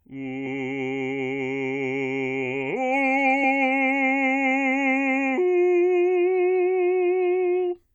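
A music clip with compressed frames skipped at 0.45 s and 3.43 s. The audio jumps ahead roughly 50 ms, then 20 ms, where 23.2 ms frames went missing.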